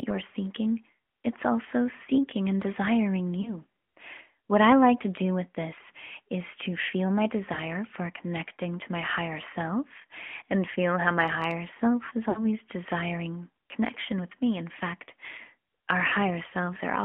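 The whole speech clip carries the sound of the AMR narrowband mobile codec. The band is held to about 200 Hz to 3.4 kHz. The voice is plainly buzzy and synthetic, as the coder models it with a few pulses per 5 ms. This fits a mid rate near 10.2 kbps.

Lost AMR speech frames then break the audio four times. At 3.42 to 3.54 s, after "also seeking and desiring", there is a brief warble. At 7.54 to 7.59 s, between "is to feel my" and "for connecting to my", there is another short dip. Each fits one dropped 20 ms frame. At 12.30 to 12.40 s, between "my higher self is" and "desiring connection with me", the sound smears and sags longer, which suggests about 60 ms lost. At 16.08 to 16.14 s, a shorter smear fits about 40 ms lost. Each time, the decoder repeats the last good settings at falling gain. The voice returns weak or rough for a moment.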